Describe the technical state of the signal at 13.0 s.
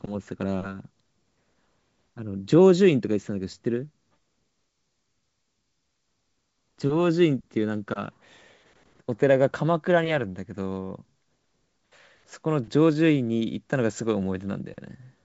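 At 13.0 s the audio is intact, carried over G.722 wideband telephone coding at 64 kbit/s with nothing above about 7.7 kHz.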